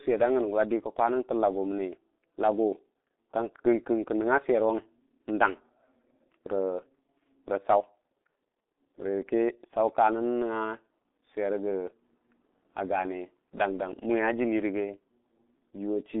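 Throughout the speech, the sound is muffled and hoarse, with smeared consonants, a narrow 250 Hz to 3.6 kHz line band and nothing above 3.8 kHz. This is heavy G.723.1 codec damage: slow 30 ms frames at a rate consistent with 6.3 kbit/s blur detail.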